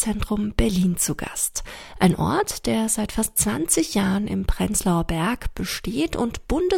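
No technical faults can be heard anywhere in the clip.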